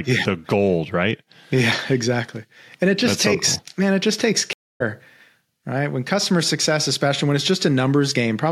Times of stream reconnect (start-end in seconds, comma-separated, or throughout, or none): 4.53-4.82